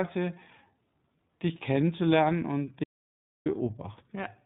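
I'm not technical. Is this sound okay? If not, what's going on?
No. Two things are wrong with this speech recording.

The first runs through the whole clip: the iLBC codec, a phone-call style compressor used for internet calling, has squeezed the sound. It throws away everything above 4 kHz, so the voice sounds narrow and boxed-in like an old telephone line. It also rebuilds the voice in short chunks, which gives it a plainly audible rough, slightly synthetic texture.

The second is an audio dropout to silence from 2.84 to 3.46 s, right after "dich kennenzulernen und". For about 0.6 s the sound disappears completely, with not even faint background noise. Whatever was said in that gap is lost. This most likely happened because the input briefly disconnected or was muted while the recording kept going and filled the gap with silence.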